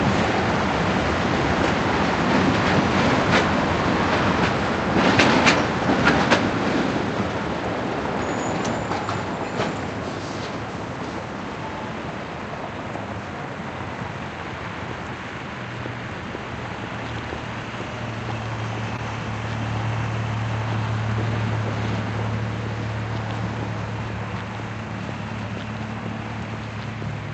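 At 18.96 to 18.99 s there is a short concealed packet loss: about 20 ms of audio arrived too late for the decoder, and the receiver bridged roughly 17 ms of it by extending the preceding sound before crossfading back into the real signal. It is heard as a brief smear or wobble, and a short transient at that point can be lost. The call path's Opus coding limits the audio to about 8 kHz.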